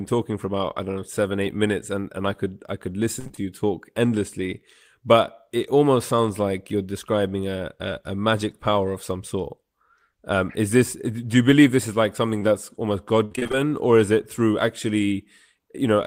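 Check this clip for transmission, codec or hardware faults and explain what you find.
The clip has two kinds of transmission fault, both from packet loss on the call path.

Repeated packet loss (robotic sound) occurs from 3.19 to 3.39 s, between "i could i could" and "you talk endlessly but", and again from 13.25 to 13.55 s, just before "or is it through". Packets kept going missing, and each hole, up to about 60 ms, was patched by extending the previous sound. Over half of each stretch is synthetic, so the speech turns choppy with pieces missing.

Short concealed packet loss appears twice, at 12.39 to 12.49 s after "believe this is like", and within that span at 12.43 to 12.46 s. About 20 ms went missing each time and was filled with continued sound, giving a brief smear.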